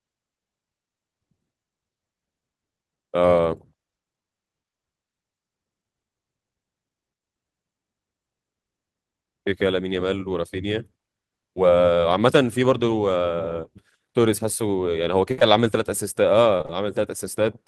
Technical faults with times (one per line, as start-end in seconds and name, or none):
15.31-15.39 burst of packet loss
15.39-15.43 short concealed packet loss
16.57-16.71 short concealed packet loss